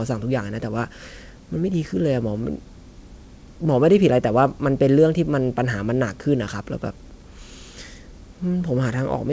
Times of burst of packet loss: none

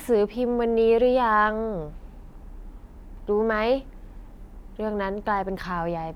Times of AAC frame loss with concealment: none

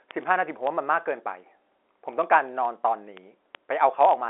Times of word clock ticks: 0.11-4.29

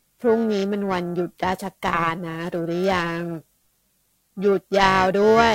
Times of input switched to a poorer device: none

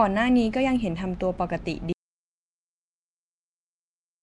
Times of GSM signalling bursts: none

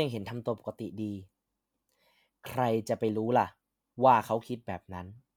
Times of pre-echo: none

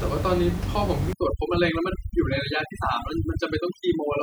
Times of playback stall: none

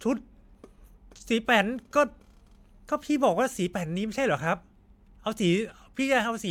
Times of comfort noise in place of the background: none

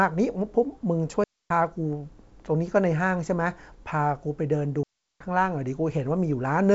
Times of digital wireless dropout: 1.24-1.50, 4.83-5.20

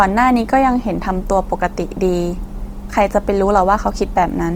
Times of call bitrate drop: none

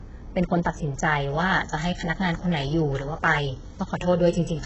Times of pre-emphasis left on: 1.30-4.66

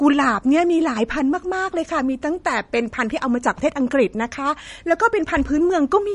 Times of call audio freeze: none

